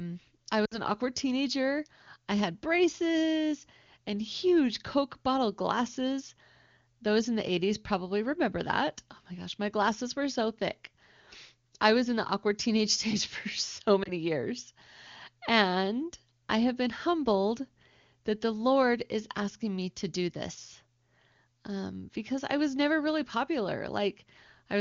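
At 0.65 to 0.78 s, just before "awkward teenager I had", lost AMR speech frames give a short smeared, fading stretch, consistent with about three 20 ms frames concealed by repeating the last good pitch and vocal-tract settings. At 14.03 s, after "stage for so", a single lost frame causes a brief dip.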